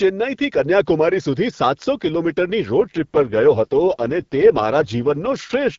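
A speech clip carried over AMR-WB (HD Voice), where the first part has the light coding texture of a mid rate such as 12.65 kbit/s. From 2.78 s to 5.77 s there is an AMR rate drop: the bandwidth stays the same with no gap, but the voice turns rough, raspy and synthetic. This fits the link falling back to the lowest mode, around 6.6 kbit/s, giving up speech detail to protect against radio errors.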